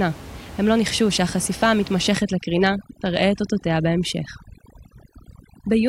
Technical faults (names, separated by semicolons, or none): overdone noise removal